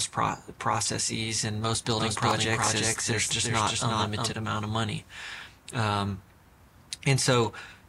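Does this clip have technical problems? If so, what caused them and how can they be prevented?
Yes. From 1.98 to 4.32 s the sound is followed by a dry, full-band repeat at about equal level, trailing by roughly 400 ms and cutting in and out abruptly. This doubled audio track likely comes from the same signal being captured twice through a slower second path. Prevent it by routing each source through only one capture path and monitoring so duplicate feeds are muted.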